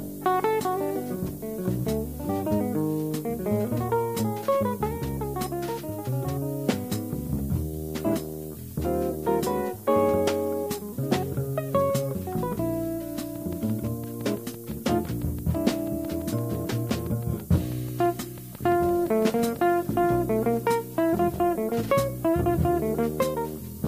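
Low bit depth with noise shaping runs throughout: a thin, steady hiss climbing toward the treble sits only about 15 dB below the audio, which fits roughly 7-bit quantisation with its rounding error pushed upward. A train of clicks runs from 13.36 to 19.57 s, around forty evenly spaced, near-identical pops at about 6 per second, peaking roughly 5 dB above the audio, likely from electrical interference or a faulty connection.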